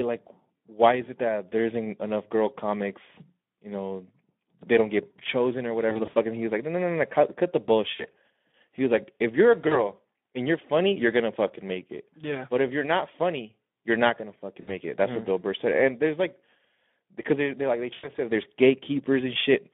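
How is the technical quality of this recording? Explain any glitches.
The recording has steady codec damage and five short concealed dropouts.

Speex codec damage runs throughout. The speech is hoarse and plainly noisy. The band is narrow, roughly 200 Hz to 3.5 kHz. Too few bits go to the excitation signal, and the sound fits a rate around 11 kbps.

VoIP packet loss concealed by the speech codec occurs at 5.90–6.15, 7.95–8.10, 9.67–9.89, 14.61–14.71 and 17.93–18.09 s. The decoder extends its last pitch and filter, so the sound smears into a buzzy tone or coloured noise that fades. The first and last gaps hold about 100 ms of missing audio. In the first, it is scattered over 240 ms. The speech stays weak briefly after each gap.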